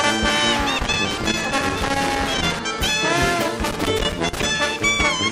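From 0.79 to 2.59 s and again from 3.66 to 4.46 s, loose connector crackle: an intermittent contact chops the signal, producing irregular scratchy bursts. Unlike clipping distortion, the crackle follows no signal peaks; unlike steady clicks, its spacing is random.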